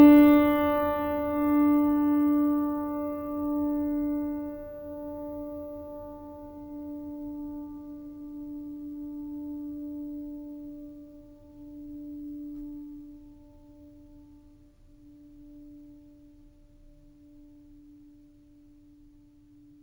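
A music clip carrying a bright, metallic fizz across its whole length that rises and falls with the music's loudness, sitting about 27 dB below it, with the lowest band between 8 and 16 kHz moving against the pitch. This is imaging from sample-and-hold upsampling: each sample was simply repeated to raise the rate, which fits a jump from 16 kHz to 48 kHz, and with no smoothing filter mirrored copies of the spectrum fill the range above 8 kHz.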